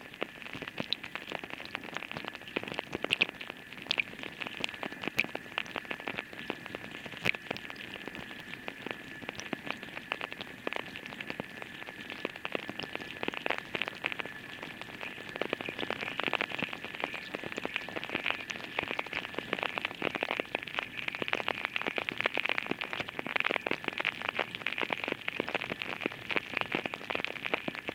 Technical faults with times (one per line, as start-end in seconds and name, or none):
4.78 dropped buffer (overrun)
8.43 dropped buffer (overrun)
13.86 dropped buffer (overrun)